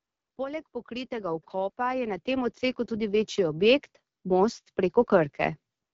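Throughout this speech clip the voice sounds rough and raspy, with a buzzy, hissy haze in the upper range. This is plainly audible damage from the AMR wideband (HD Voice) codec, and the coarseness fits its low 8.85 kbit/s mode, where too few pulses drive the vocal-tract model and the top band is filled with shaped noise. From 0.37 s to 4.58 s the voice and the background swell together steadily, ending about 14 dB louder. This is automatic gain rising: the gain control judged the input too quiet and kept turning it up over those four seconds. The call's microphone processing takes out the lowest bass, which is normal.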